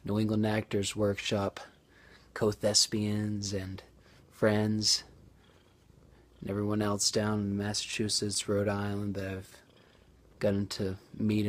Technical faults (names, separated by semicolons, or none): scattered short gaps; jitter buffer slow-down